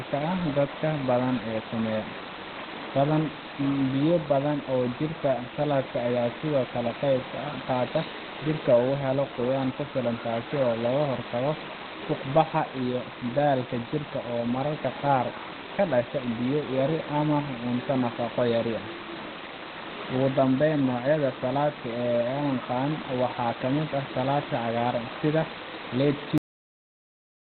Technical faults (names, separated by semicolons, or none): Opus compression; cut-off end